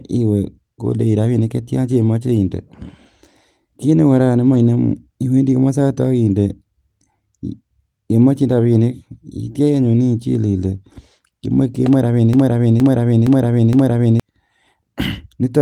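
At 4.53 s and again at 10.61 s, a single lost packet was rebuilt from error correction: the next packet carried a low-bitrate copy, so 20 ms plays without a gap but sounds briefly rougher and noisier. A spectrogram shows a thin, smeared vertical slice; the waveform stays continuous.

From 12.33 s to 14.20 s a broken-record loop takes over: one 466 ms fragment of speech repeats exactly, back to back, four times, and the speech that belonged there is lost. The likely cause is a stalled player, encoder or stream resending its last fragment. The waveform and spectrogram show identical blocks tiled in sequence.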